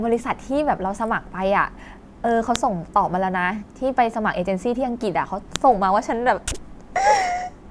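At 2.56 and 5.56 s, a file header played as audio: header bytes from 3-second joined pieces snap loudly, showing as brief spikes and full-height vertical lines on a spectrogram.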